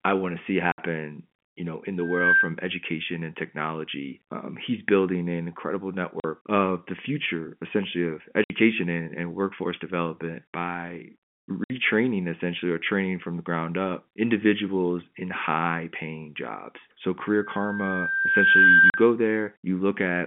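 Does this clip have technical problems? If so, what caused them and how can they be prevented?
Yes. Packet loss filled with silence cuts hard-edged gaps at 0.72 s (after "I want to see"), 6.20 s (after "he's building an incredible"), 8.44 s (after "the future essentially of"), 11.64 s and 18.90 s, lasting 40 to 60 ms, which fits 20 ms packets dropped in runs of two or three. Preventing it needs a steadier network path, plus a jitter buffer and packet loss concealment at the receiver.

A loudspeaker feedback squeal at 1.6 kHz rises from 1.98 to 2.55 s, building in about 0.3 s, and again from 17.25 to 19.12 s, building over about 1.5 s. At its peak it sits roughly 10 dB above the speech. The microphone is picking up its own loudspeaker, and the loop gain at that frequency exceeds one. Preventing it means using headphones or echo cancellation, or reducing speaker level and microphone proximity.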